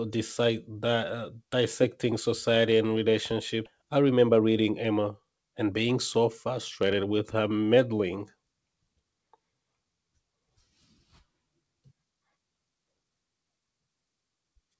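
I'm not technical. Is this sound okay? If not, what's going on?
No. At 3.66 s the speech suddenly jumps forward, losing about three-quarters of a second. This skip ahead happens when a chunk of audio is dropped in transit or by the receiver's buffer.

From 3.82 to 8.04 s the talking sounds slightly rushed, about 8% faster but at normal pitch. This jitter buffer speed-up trims tiny slices to catch up on delay.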